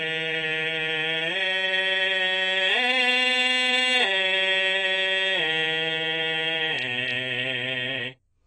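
From start to finish the music has nothing above 9 kHz, and what remains sounds smeared and watery, with a warbling, fizzy swirl on sustained tones. The likely cause is heavy AAC compression, at a rate that fits roughly 20 kbps. The encoder discards upper bands and quantises the rest coarsely, so it leaves spectral holes and noisy patches. A plain low-pass filter would sound dull but clean, while here the remaining band shimmers and churns.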